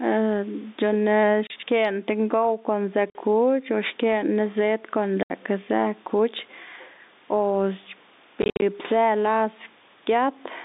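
Throughout the speech, the level pumps with a swing of roughly 10 dB, leaving loud and soft passages squashed together. This gain pumping is likely a fast limiter fighting an input gain set far too high.

Packet loss filled with silence punches hard-edged holes into the speech: 30 ms at 1.47 s, 50 ms at 3.1 s, 70 ms at 5.23 s, then a scattered burst from 8.42 to 8.62 s totalling 140 ms, its longest gap 60 ms. The multiples point to 10 ms packets dropped and replaced with nothing.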